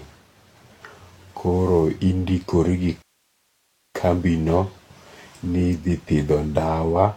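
At 3.02 s the speech drops into silence for about 0.92 s, a rebuffering stall where playback starved for data, then picks up exactly where it left off.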